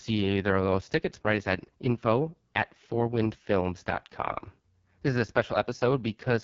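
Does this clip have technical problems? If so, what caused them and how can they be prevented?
Yes. The speech carries AMR wideband (HD Voice) codec damage throughout: heavy roughness and rasp from the pulse-driven vocal tract model being starved of bits, which fits the lowest 6.6 kbit/s mode, and nothing above about 7.3 kHz. To prevent it, run AMR-WB at 12.65 kbit/s or higher.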